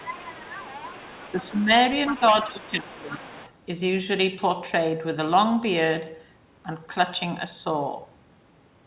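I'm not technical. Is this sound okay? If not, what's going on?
No. Right from the start until 1.5 s, and again around 2.03 to 2.19 s, 2.37 to 2.71 s and 2.97 to 3.52 s, you can hear the other side's voice leaking through, faint underneath. Likely this side's device is playing the far end on a loudspeaker and the echo canceller isn't catching all of it.

There's also speech suppressed in double talk: at 1.34 to 1.7 s, briefly at 2.19 to 2.34 s, and for most of 2.52 to 3.41 s, the main talker gets noticeably quieter or patchy while both people overlap, likely because the canceller is turning everything down together.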